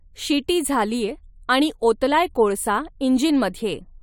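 Listening to the speech recording, nothing stood out as a technical fault at any point.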